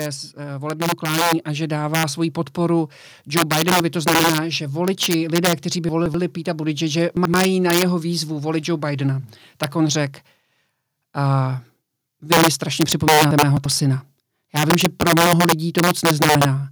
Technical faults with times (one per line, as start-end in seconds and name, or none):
0.00-16.71 integer overflow
0.35-2.27 automatic gain rising
5.89-6.14 chunks out of order
7.17-7.34 chunks out of order
13.31-13.65 chunks out of order